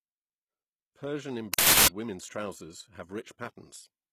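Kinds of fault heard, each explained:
HE-AAC compression: The speech has a plainly audible codec sound, likely from HE-AAC at a low bitrate around 20 kbps. The treble is rebuilt by copying lower bands upward, so it stays bright but isn't quite real, and s sounds come out gritty and metallic.
Uninitialised buffer: From 1.54 to 1.88 s there's a burst of harsh digital noise where playback read a block before any audio had been written into it. That's leftover memory coming out as samples, and the 0.34 s length fits a 16384-sample block.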